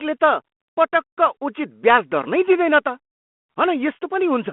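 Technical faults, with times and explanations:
No technical faults can be heard in the recording. The speech comes through a G.726 ADPCM link at 32 kbit/s, held to the telephone band of 200 Hz to 3.4 kHz, with only a light grain from the coding.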